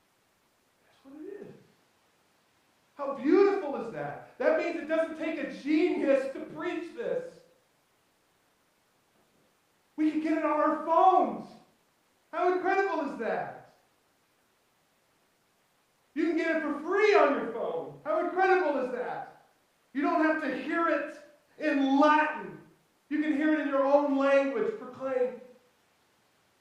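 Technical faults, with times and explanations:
No technical faults can be heard anywhere in the speech. There is nothing to time or explain.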